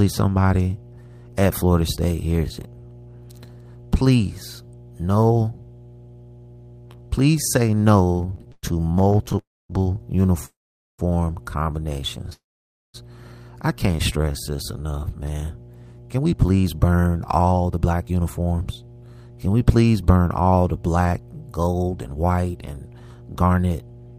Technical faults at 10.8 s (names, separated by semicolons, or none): mains hum; call audio freeze